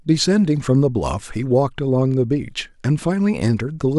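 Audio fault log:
No audible faults found.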